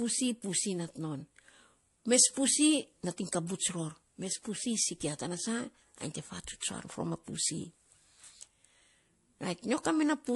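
Throughout the speech, a watery, swirly texture with smeared consonants is heard, most likely from MP3 compression at a low bitrate, which fits roughly 48 kbps. A spectrogram would show weak high-frequency detail flickering on and off between frames.

From 9.83 to 9.85 s, pre-echo puts a 25 ms hiss before a sharp attack, about 11 dB above the quiet floor. This fits a long block of about 48 ms with no short-block switching, which spreads noise ahead. A waveform and spectrogram would show a broadband smear just before the onset.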